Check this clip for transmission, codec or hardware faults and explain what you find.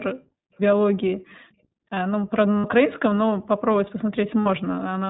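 Three faults are audible in this speech: iLBC codec coloration throughout, two short dropouts concealed by the iLBC decoder, and one brief echo leak.

iLBC codec: Throughout the clip the speech is band-limited to 4 kHz and sounds slightly rough and synthetic. The damage is plainly audible and fits the 15.2 kbps, 20 ms-frame mode. The codec models each frame's excitation independently, so fine detail is coarsened frame by frame.

Lost iLBC frames: At 2.58 to 2.65 s and again at 4.40 to 4.47 s, about 60 ms of audio goes missing each time, which fits three lost 20 ms frames. The decoder fills each gap by repeating the last pitch cycle mixed with noise, which produces a brief held, buzzy vowel. Because the frames are coded independently, the speech recovers immediately afterward.

Echo leak: From 3.45 to 3.60 s, a faint copy of the speech returns about 349 ms late, roughly 30 dB below the direct signal. 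The likely cause is a far-end loudspeaker whose echo canceller failed to remove everything its microphone picked up, sending a delayed fragment back.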